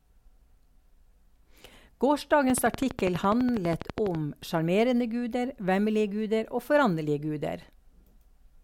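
From 2.50 s to 4.16 s, a train of clicks runs through the speech. It ends just before "sjarmerende guder". The clicks come at a steady 12.1 per second, around twenty in all. Each has much the same sharp shape, and they tick on evenly through the pauses as well. They peak roughly 15 dB above the speech, so they stand out clearly. The cause is likely interference from nearby equipment or a faulty connection or power supply.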